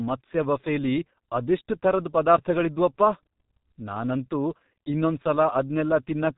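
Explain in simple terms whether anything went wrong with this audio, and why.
Something did go wrong: from start to finish, the speech has passed through the G.723.1 codec, an old internet-phone format that squeezes the voice hard. Everything above about 3.8 kHz is gone, so it sounds muffled, and the damage here is heavy: the voice turns rough and hoarse, and consonants blur together. Simple muffling from a bad microphone would keep consonants clean; this codec also smears them because it redraws the voice only in coarse steps.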